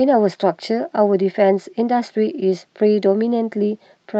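No dropouts, clicks, distortion or level problems appear anywhere in the recording; the speech runs unbroken with nothing to flag.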